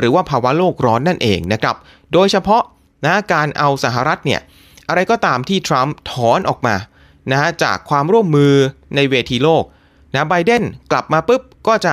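At 1.44 s and again at 8.45 s there is a bit error spike: a flipped bit forces a sample jump and immediate return, heard as a sharp broadband tick unrelated to the speech, peaking near about -12 dBFS first, then about -18 dBFS.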